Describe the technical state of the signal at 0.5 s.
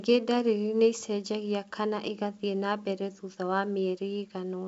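At 0.5 s the speech is intact with no fault, carried by ordinary G.722 wideband telephone coding at 64 kbit/s, which leaves nothing above about 7.7 kHz.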